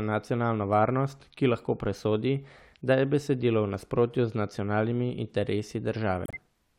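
Corrupt frame muted at 6.25 to 6.36 s near the end of this speech: damaged compressed frames were rejected by the decoder and replaced with silence, leaving an abrupt hole of several frames.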